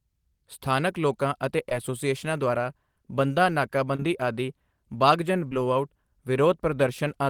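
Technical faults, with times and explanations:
1.69–1.72 s, 3.96–3.99 s, 5.48–5.52 s: short concealed packet loss. Each sounds like a brief smear: 10 to 30 ms of speech arrived too late, so the receiver stretched the preceding sound across the gap.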